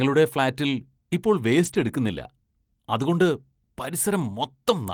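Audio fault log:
0.67–0.69 s: lost packet rebuilt from error correction. A brief rough, noisier patch with no gap, about 20 ms long, consistent with one lost packet replaced by the low-bitrate copy carried in the next packet.
1.65–1.87 s: lost packet rebuilt from error correction. A longer rough, grainy stretch of about 120 ms with no dropout. This fits several lost 20 ms packets, each played from its coarser backup copy instead of being silenced.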